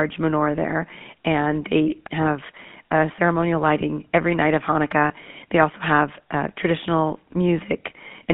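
Throughout, the GSM full-rate codec gives the speech a plainly audible buzzy, gravelly grain. The coder models the vocal tract and excites it with sparse regular pulses, which fits a 13 kbps full-rate coder. Unlike simple telephone band-limiting, which only muffles, it adds roughness within a 150 Hz to 3.5 kHz band.

At 3.16 to 3.19 s, after "and they have a" and before "lighting every night of", and again at 5.08 to 5.11 s, after "lighting every night of", lost GSM frames leave brief metallic rings. Each covers about one 20 ms frame, which the decoder fills by repeating the last good settings, so the sound is held rather than silenced, unlike a true dropout.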